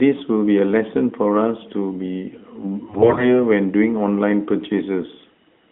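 Speech over a narrowband mobile line, band-limited to about 3.5 kHz. From 2.88 to 3.45 s, AMR bit errors make the voice hoarse, scratchy and gargly. Flipped low-priority bits, roughly 15 percent, misplace excitation pulses and corrupt fine pitch, gain and spectral values.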